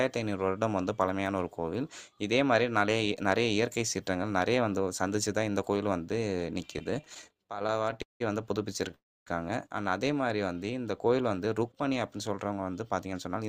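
From 6.73 to 8.22 s, packets kept arriving late and the jitter buffer repeatedly ran dry, producing repeated stalls (stutter): 27 brief hold-ups, the longest 180 ms, that stretch the sound by about 450 ms without losing any of it.

From 8.95 to 9.28 s there is a call audio freeze. Packets were likely held up in transit, so the last sound is extended and fades, leaving 250 ms of silence before the audio resumes where it stopped.

From 10.21 to 10.72 s, a jitter buffer slow-down repeats short stretches of the audio to rebuild reserve, adding 66 ms. Playback runs at 89% speed with unchanged pitch, so sounds are audibly drawn out.

From 12.45 s to the end, a jitter buffer speed-up trims small pieces to shed excess delay, about 150 ms in all. The audio plays at 112% speed at the same pitch and sounds hurried.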